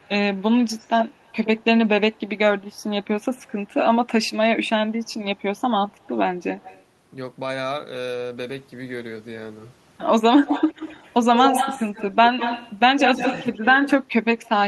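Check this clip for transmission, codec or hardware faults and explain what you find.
Echo leak is present, in four stretches: 0.0 to 2.38 s, 3.36 to 3.52 s, 4.25 to 6.83 s, and 10.46 s to the end. A delayed copy of the speech trails the original. It lags by 75 ms at first, and by 134 ms in the last stretch. The copy is faint early on, barely audible near 3.4 s, and nearly as loud as the speech at the end. The likely cause is an echo canceller on a loudspeaker-end device failing to remove its own playback.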